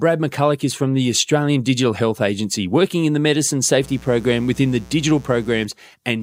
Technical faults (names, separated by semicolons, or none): mains buzz